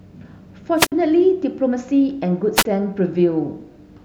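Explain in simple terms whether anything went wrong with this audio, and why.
Something did go wrong, twice. The speech cuts out briefly from 0.77 to 0.92 s, and again from 2.55 to 2.65 s. This is a wireless microphone squelch dropout. The radio signal from the microphone weakens. The receiver then mutes its output instead of passing on loud static. You hear a short burst of hiss, then a hole of near silence, about 54 ms the first time and 26 ms the second. Then the speech comes back.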